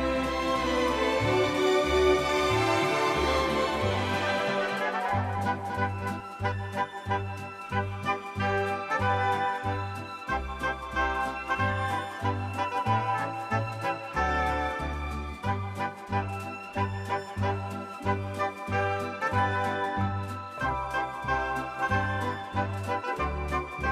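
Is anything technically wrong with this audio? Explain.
Yes, there's a doubled audio track from the very start until 6.2 s, where the second copy drops out abruptly. A full-band duplicate of the sound trails the original by around 200 ms and sits a few dB quieter, with no decay or room colour, so it reads as a hard slapback rather than an echo. It's likely caused by the signal being captured twice, once through a slower path, or by an edit leaving two out-of-step copies layered.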